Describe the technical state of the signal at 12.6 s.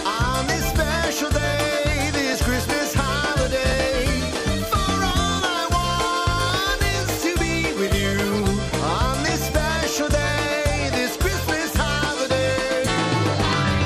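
At 12.6 s the audio sits within a run of regular clicks from 0.95 s to 13.44 s, spaced every 1.39 s. They are likely clock drift buffer slips: two free-running clocks differing by about a thousand ppm, forcing a short block to be dropped or repeated. The strict spacing sets them apart from random dropouts.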